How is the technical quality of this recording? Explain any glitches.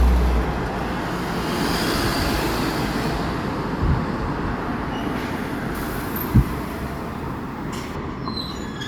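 One fault stands out. From 5.75 to 7.95 s the sound turns thin, bright and hissy: pre-emphasis left on, an FM 50 µs treble boost never undone, leaving 10 kHz about 11 dB too strong.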